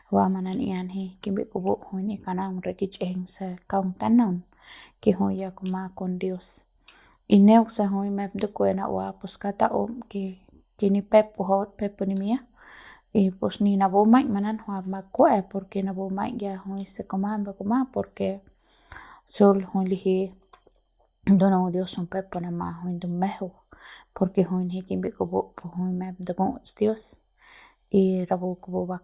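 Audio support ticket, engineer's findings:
Listened through the speech recording and nothing stood out; no issue to log against this ticket.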